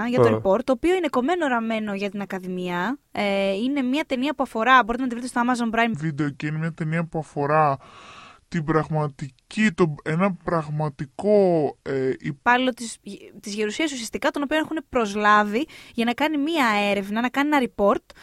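Speech, with one section at the wrong speed from 5.94 to 12.45 s. It runs at about 0.7 times normal speed. Pitch drops roughly seven semitones, so the voice turns deep and slow. It snaps back before "της της γερουσίας ουσιαστικά". A playback or editing clock mismatch is the likely cause.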